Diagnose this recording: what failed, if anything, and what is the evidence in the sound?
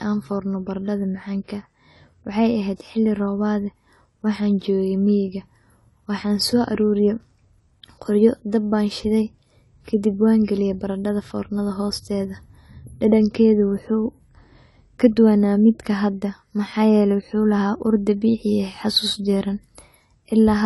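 The codec stage likely failed here, with AAC compression at a low bitrate, consistent with about 32 kbps AAC-LC. Throughout the speech nothing is present above 11.5 kHz, and coarse quantisation leaves the sound dull and smeared, with a warbling, fizzy texture on sibilants.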